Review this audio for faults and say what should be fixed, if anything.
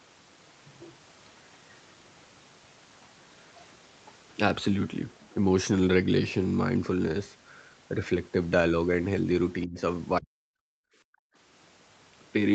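Speech suppressed in double talk, at 9.66 to 9.79 s and again at 10.18 to 10.5 s. The speech dips by roughly 25 dB in the first spot and close to 40 dB in the second, for about a sixth and about a third of a second. The likely cause is the echo canceller hearing far-end audio at the same moment and failing to separate this talker from loudspeaker echo, so it attenuates everything. Preventing it means tuning the canceller's double-talk detection so near-end speech is kept while the far end is active.

Background gated by the echo canceller, at 10.78 to 11.36 s. The room sound falls away by about 40 dB for roughly half a second, then returns. The canceller's suppressor clamped the microphone while the loudspeaker was playing, removing the ambient bed along with any echo, and released it once the canceller let go. Preventing it means easing the suppressor's attenuation or adding comfort noise so the background stays continuous during loudspeaker activity.

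The band ending at 8 kHz comes from the call path and is not one of these faults.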